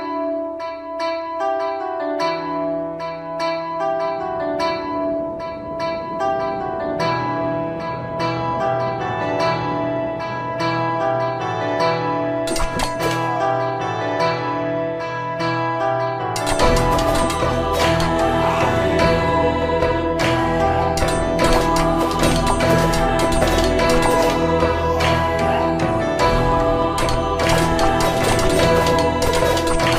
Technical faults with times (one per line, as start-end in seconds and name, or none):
none